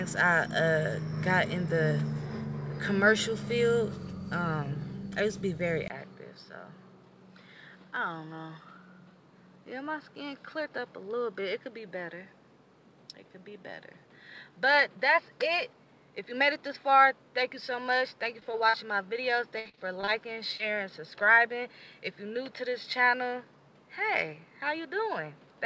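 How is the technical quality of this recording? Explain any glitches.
The recording has three kinds of fault: a drop in quality at 5.88 s that lasts to the end, and a cluster of packet-loss glitches between about 18.4 and 20.6 s. Before the switch, the wideband call path is audible with its content reaching up to 8 kHz.

Input switched to a poorer device, at 5.88 s: the input most likely changed mid-recording to a narrower-band microphone or headset profile. After a silence of about 20 ms, nothing is heard above 5.4 kHz. The sound turns duller and about 5 dB quieter, with a new noise floor roughly 35 dB below the signal.

Short concealed packet loss, at 18.40, 18.51, 18.69 and 20.57 s: audio between 20 and 40 ms long never arrived in time, and the receiver filled each hole by extending the preceding sound before blending back. Each one is a brief smear or wobble, and the longest is at 18.69 s.

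Repeated packet loss (robotic sound), from 19.59 to 20.09 s: five gaps in half a second, the longest 58 ms, left about a third of that stretch patched by continuation. Because the patches follow one another so closely, the sound turns choppy, with fragments missing.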